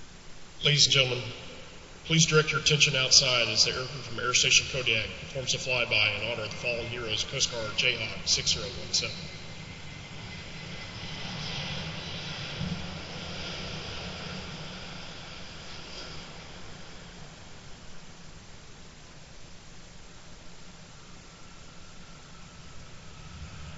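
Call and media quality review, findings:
No audible faults found in this recording.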